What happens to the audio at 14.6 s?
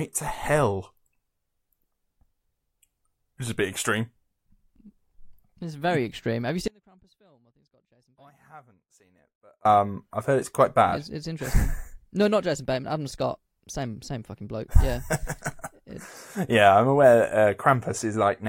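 Nothing goes wrong at 14.6 s: the speech runs on intact through that moment, with no dropout, click or distortion.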